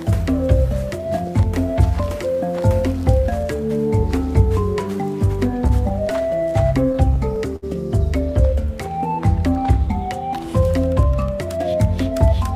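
From 5.67 to 6.33 s there are scattered short gaps. About four tiny packet losses were patched by continuing the last sound, leaving brief ticks.

From 6.93 to 7.64 s comes a stutter of repeated stalls. Late packets emptied the jitter buffer four times. Continued sound fills 94 ms, the longest stall 63 ms, and the audio drags.

From 11.58 to 12.34 s there is a jitter buffer speed-up. Excess buffered audio was trimmed, roughly 50 ms in short pieces. Playback runs at 106% with unchanged pitch, sounding hurried.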